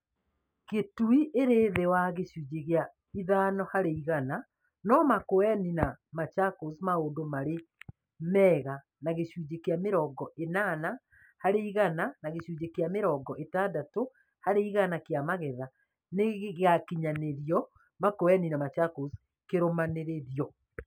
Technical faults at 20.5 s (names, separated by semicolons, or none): imaging from linear upsampling